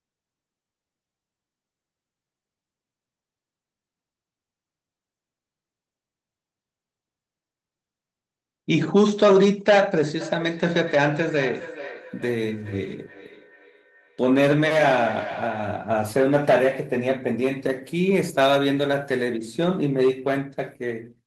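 From 10.2 to 15.85 s there's a feedback echo between two devices: another device in the room replays the call into a mic that no canceller covers. The speech comes back roughly every 0.4 s, thin and ringing, peaking about 14 dB below the talker.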